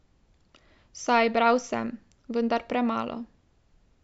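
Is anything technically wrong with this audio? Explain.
No, nothing in this speech recording points to a technical fault. There is no event in the audio that calls for explanation.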